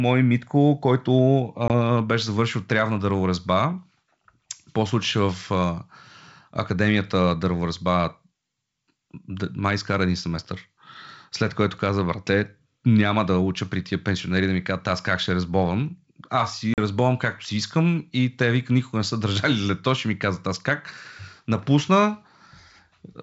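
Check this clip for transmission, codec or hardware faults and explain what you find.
Two short dropouts break the speech, at 1.68 s and at 16.74 s. These are packet loss on an ADPCM call, heard against wideband G.722-style coding. Each is a hard-edged silent hole, about 20 ms and then about 40 ms long, which fits one lost packet and then two. The decoder fills the gap with silence. Its adaptive predictor and step size then no longer match the sender's, so the speech comes back with brief slight distortion before settling.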